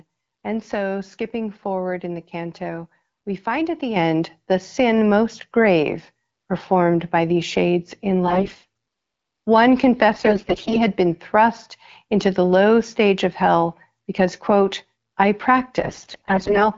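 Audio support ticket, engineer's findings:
Mic volume stepped up at 3.96 s. Voice and background jump together by about 7 dB in a single step, no ramp. Probable component: call software's auto input gain, which decided the mic was too quiet and bumped the device input level in one go. Worth checking the AGC setting on the client side.

AMR bit errors at 8.27 to 8.65 s, 10.13 to 10.81 s and 15.81 to 16.67 s. Speech goes hoarse, scratchy and gargly while pitch and level roughly hold. Probable component: weak radio link corrupting the less-protected bits of the AMR frames, something like 15 to 20 percent of them, while the checksum on the core bits still passes. Excitation pulses land in the wrong spots and the fine pitch, gain and spectral values drift. The wideband codec underneath sounds clear outside these bursts, which fits the 12.65 kbit/s mode.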